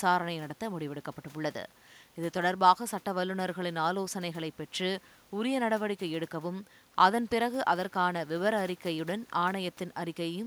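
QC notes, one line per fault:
Nothing stood out on listening to this speech recording.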